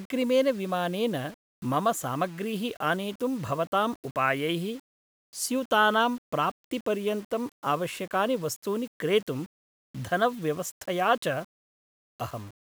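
Throughout the speech, a grainy distortion follows the signal, turning quiet passages gritty and letting soft tails sputter to silence. This is likely low bit depth without dither, fitting 7-bit rounding, with error about 30 dB below the signal. The waveform shows stair-steps, and the spectrogram shows broadband grit tracking the sound.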